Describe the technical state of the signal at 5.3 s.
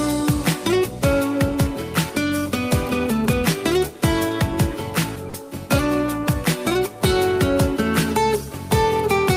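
From 5.29 to 5.33 s, sound is dropped by the voice detector, likely Opus DTX treating it as background. For 40 ms a flat comfort-noise band replaces the signal on the spectrogram.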